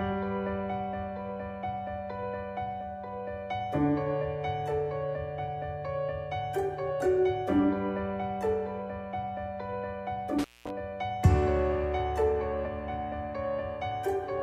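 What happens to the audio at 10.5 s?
At 10.5 s the audio sits inside an intermittent contact fault spanning 10.39 to 10.70 s. A loose plug or cable connection momentarily loses contact, so the signal path opens for roughly 210 ms. The sound drops out abruptly, with crackle at the points where the contact breaks and remakes. While the line is open, a faint hiss remains in place of the programme material.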